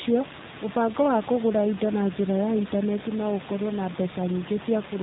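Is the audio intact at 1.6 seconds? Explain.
No. At 1.6 s, as throughout the clip, the speech carries G.729 codec damage that is plainly audible. The codec rebuilds each 10 ms frame from a vocal tract filter, a pitch predictor and a few pulses, so the voice sounds rough and faintly synthetic, and the room noise, about 11 dB below the speech, warbles. This fits an 8 kbit/s G.729A stream. On a spectrogram, energy stops abruptly at 4 kHz, and harmonics look smeared and blotchy frame to frame.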